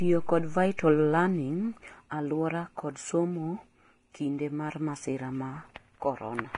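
Throughout the speech, heavy lossy coding, likely Vorbis compression at a low bitrate around 30 kbps, strips everything above 10.6 kHz and quantises the remaining treble coarsely, so fine detail turns to noise. The voice sounds hissy, grainy and dull, with roughened tones.

At 0.77 s, a sharp onset lands late in a transform block, and quantisation noise sized for that loud moment spreads into the silence just before it. This pre-echo spans about 16 ms, a brief hiss ahead of the attack that leaves it smeared and soft.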